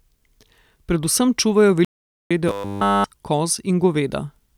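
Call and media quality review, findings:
Playback stall, 1.85–2.31 s: speech stops mid-flow for about 0.46 s, then resumes. The waveform is a flat, silent gap, and the spectrogram shows a blank vertical band. Likely a player underrun or blocked audio thread starving the output.

Robotic sound from repeated short buffers, 2.48–3.04 s: rigid metallic buzz at 100 Hz that loosely tracks the speech. The spectrogram shows fixed harmonics every 100 Hz, and the waveform shows identical repeating cycles. Likely late audio, with the whole span replaced by repeated 10 ms chunks.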